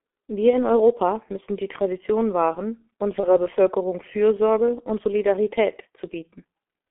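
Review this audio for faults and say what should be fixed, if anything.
G.723.1 codec coloring runs through the whole speech clip. The sound is squeezed into a telephone band of roughly 250 Hz to 3.4 kHz and heavily coded at a rate that fits 6.3 kbit/s. Because this coder works in 30 ms frames and updates its vocal-tract model slowly, consonants smear together and the voice comes out muffled and hoarse, with no air above the band. To prevent this, carry the call on a wideband codec at a higher bitrate instead of G.723.1.

VoIP packet loss concealed by the speech codec appears at 0.50 to 0.60 s and again at 3.20 to 3.39 s. Each gap sounds like about 30 ms of lost audio. At each one, the decoder filled the hole by repeating its last pitch and filter with falling gain, which gives a brief stretch of buzzy tone or coloured noise that fades. Since each frame is built from the previous one, the voice stays weakened for a while after real audio resumes. 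To prevent this, reduce loss on the network path and use a jitter buffer, with forward error correction or redundancy.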